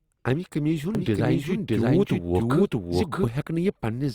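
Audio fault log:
0.95–3.29 s, doubled audio track: a second full-band copy of the speech runs about 0.7 s behind, at roughly the same level. It has no decay or room colour. It starts and stops abruptly. The likely cause is a slower second capture path or an edit holding two copies out of step.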